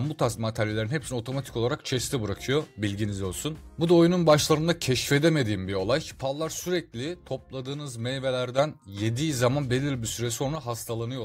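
At 6.22 s the level falls abruptly by about 6 dB and stays down until 8.58 s, then returns just as suddenly. The same drop recurs at 10.55 s and lasts to the end of the clip. Both events are likely a case of one channel drops out: with one side of the stereo pair lost, the mono sum carries only half of the shared content, and anything present only in the missing channel vanishes for those spans.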